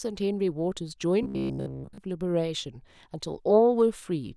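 From 1.23 to 1.98 s, playback likely looped a 15 ms buffer, causing robotic sound from repeated short buffers: a rigid, metallic 66.9 Hz buzz throughout.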